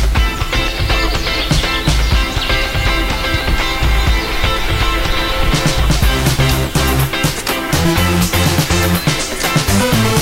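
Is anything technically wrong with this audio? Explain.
Yes. Throughout the clip there is grainy distortion that rises and falls with the sound. It fits low bit depth without dither, likely a signal rounded to 5 bits. Without dither, the rounding error tracks the waveform, landing roughly 20 dB below the signal, so quiet passages turn gritty and the softest ones collapse to silence or flicker between two levels. A waveform view shows visible stair-stepping, and a spectrogram shows broadband hash that follows the signal's loudness.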